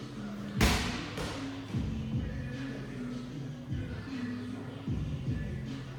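No technical faults can be heard anywhere in this audio.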